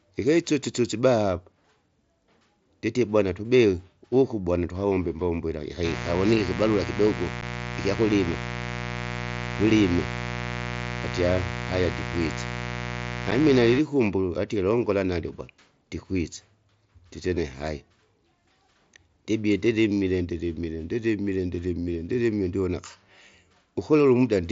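A steady, raspy buzz starts at 5.82 s, right after "bwana tukawombe imbombo ila", and lasts until 13.82 s, just before "atie longola nalyo gwala". It sits roughly 10 dB below the speech. This is mains buzz. Sharp switching spikes, twice per 60 Hz cycle, leak into the audio path and spread harmonics well into the kilohertz range.

Inside that stretch, at 7.41 s and again at 13.31 s, the speech drops out abruptly for about 7.5 ms, leaving a tiny hole. This is unconcealed Bluetooth headset packet loss. Each gap fits a single lost packet on the wideband mSBC link, and nothing was patched in to cover the missing piece.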